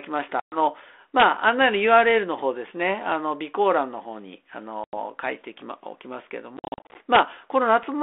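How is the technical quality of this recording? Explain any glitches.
The recording has two kinds of glitch: three dropouts with unsteady recoveries, and two sharp cracks. All of it sits on a narrow telephone band of roughly 300 Hz to 3.5 kHz, which fits G.726 ADPCM at about 32 kbit/s.

Packet loss on an ADPCM call causes the dropouts. The first, 0.40 to 0.57 s, is a hard-edged silence of about 120 ms. The second, 4.84 to 4.95 s, lasts about 90 ms. From 6.57 to 6.96 s the sound stutters through many short gaps, about 250 ms lost across 380 ms with no gap longer than 50 ms. These correspond to around ten, ten and thirty lost packets. When sound returns after each gap it comes back slightly distorted, then settles within tens of milliseconds. This happens because the receiving decoder's adaptive predictor and step size no longer track the sender's after the missing data.

Integer overflow causes the two violent cracks, at 1.20 to 1.24 s and 7.15 to 7.19 s. 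Each is much harsher than ordinary clipping. On these loud peaks the level ran about 2 dB past the largest value the integer format can hold. Instead of being held at the limit, those samples wrapped around to the opposite sign, so each waveform peak jumps across the full range.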